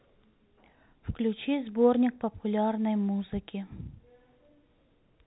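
No faults can be heard anywhere in this speech clip. It carries the narrow band of G.711 telephone coding, with nothing above about 3.9 kHz and at most a faint trace of the coding itself.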